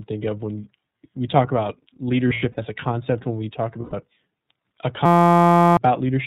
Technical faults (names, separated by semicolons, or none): iLBC codec; lost iLBC frames; system hang loop